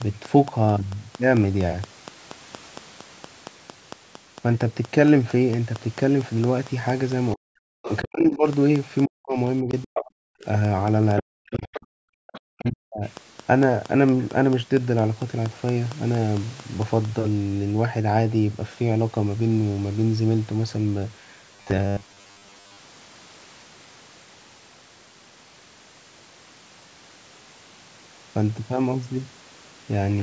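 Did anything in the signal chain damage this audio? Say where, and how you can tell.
Yes. Regular clicks run from 0.02 to 17.06 s at 4.34 per second, about seventy in all. They peak about 5 dB above the signal and tick through the pauses too. Their even spacing and near-identical shape point at the analogue wiring or interface, likely interference from nearby equipment.

Speech suppressed in double talk sits in call processing. The talker drops by up to about 40 dB in pieces from 7.34 to 8.46 s, 9.05 to 10.46 s and 11.21 to 13.03 s. The echo canceller, likely confused by both sides talking, turned everything down.

The other side's voice leaks through in those same stretches. There are brief scraps at 7.84 to 7.90 s and 11.74 to 11.80 s, about 15 dB below the talker. A louder piece at 9.83 to 10.05 s is only about 5 dB down. From 12.30 to 12.69 s it sits about 20 dB down. The canceller likely left residual loudspeaker echo in the microphone.

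A robotic sound from repeated short buffers appears at 21.56 to 22.79 s, at the driver or buffer stage. A rigid metallic buzz at 100 Hz follows the speech loosely, which fits a 10 ms block being replayed. Roughly half the audio there is repeats, likely from late-arriving buffers.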